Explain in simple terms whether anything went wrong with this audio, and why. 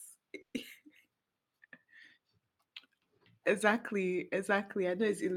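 Something does go wrong, early on. From about 0.41 to 0.55 s there is a call audio freeze. The sound briefly stretches into a fading buzz, then goes quiet for about a tenth of a second. Nothing is lost. The speech just resumes late. Delayed network packets are the likely cause.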